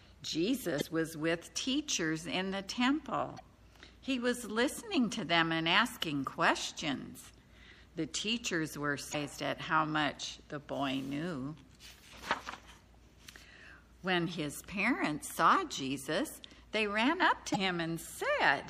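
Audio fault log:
Throughout: MP3 compression, likely the cause of the plainly audible codec damage. Weak frequency components drop in and out between frames, giving a watery, swirling texture with metallic chirps on bright sounds and smeared attacks. The amount of damage fits a low bitrate of around 64 kbps, where the encoder runs short of bits and discards detail its hearing model judges least important.
0.77 to 0.82 s, 3.36 to 3.40 s, 6.89 to 6.93 s, 9.11 to 9.15 s, 17.52 to 17.56 s: damaged data in a compressed stream. Each event is a short blip or squawk lasting about 44 ms. The decoder hits corrupted bytes, misreads or rejects the frames there, loses sync and searches for the next valid frame header. The result is a brief burst of garbled output.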